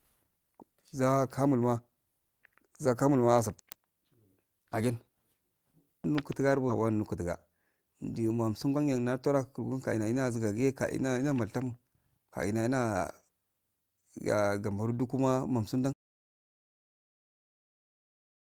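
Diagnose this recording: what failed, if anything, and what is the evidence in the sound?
Network and jitter buffer: a skip ahead at 6.69 s. After "nukuta garba" the speech jumps straight to "wara nutuga" with no gap. About 0.4 s of speech is gone. A stretch was discarded while later audio was already queued, so the two sides join directly.

Jitter buffer: a jitter buffer speed-up from 8.51 to 10.31 s. The speech runs at 113% of normal speed at unchanged pitch and sounds hurried, just before "zigage kaina ina maltan". Short pitch-period pieces were cut repeatedly, removing roughly 0.2 s to shrink the backlog.

Capture input: an audio dropout to silence from 15.93 s to the end. Right after "dukuma nonsudo" the sound stops dead. What follows is silence with no room tone. The input was likely lost, through a disconnected device or a failed link, while the recorder kept writing silence.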